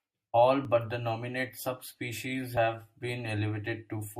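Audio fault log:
0.65 s, 1.49 s and 2.57 s: dropped buffer (overrun). Each point has a sudden jump forward in the speech and no gap of silence. The likely cause is samples not being collected before the hardware overwrote them. The pieces on either side are then butted together. The first two jumps are short, roughly 10 ms lost each. The one at 2.57 s is larger, about 30 ms.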